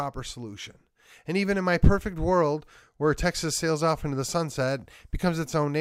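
Something on the USB bus or in the audio driver is stalling the stream every 0.5 s, producing periodic USB or driver dropouts from 0.13 s to 5.63 s. About ten times, a tiny fraction of a millisecond of speech is skipped outright, leaving evenly spaced ticks in the speech.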